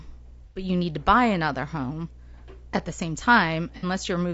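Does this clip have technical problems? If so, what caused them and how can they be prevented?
Yes, there are two kinds of problem here. The whole clip of speech has a rough, grainy texture, with noise filling in between the harmonics and a thin, somewhat synthetic top end. That sound is likely from low-delay AAC compression, the AAC-ELD style codec used for video calls, and the damage fits a fairly starved rate of around 32 kbps. Its short frames can't resolve pitch harmonics well and eat up bits, so the detail goes. To prevent it, give the encoder more bitrate or switch to a codec mode with longer frames when latency allows.

There's also AAC frame loss with concealment in two spots. From 0.44 to 0.64 s, just before "you need to buy", the sound turns smeared and noisy. That points to a run of roughly four lost frames, which the decoder patched by reusing the last good spectrum with scrambled phase. 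A shorter patch at 3.77 to 3.86 s sounds the same way, more briefly. To prevent it, fix the transport with better network stability, jitter buffering or error protection, so frames arrive intact.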